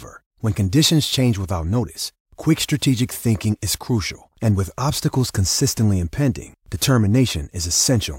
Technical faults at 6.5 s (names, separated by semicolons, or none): corrupt frame decoded